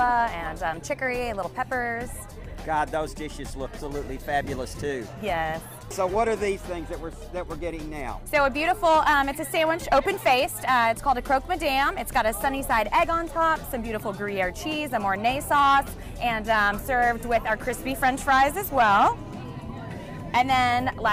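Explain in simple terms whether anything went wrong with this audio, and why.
At about 3.77 seconds the audio suddenly jumps forward. Nearly half a second of sound is simply gone, with no pause or filler, and the two sides of the gap are stitched together directly. This is a skip ahead. The receiving device had fallen behind and had newer audio already waiting, so it discarded the late stretch and carried on from the newer point, cutting the delay by roughly that half second.

Right after that, from about 4.04 to 6.96 seconds, the sound runs slightly quick, about 5 percent faster than normal, while the pitch stays the same. It can feel a little hurried. This is a jitter buffer speed-up. The receiver was holding more audio than it wanted, so it repeatedly trimmed out tiny slices, each only a few milliseconds long, adding up to a small fraction of a second, to catch back up.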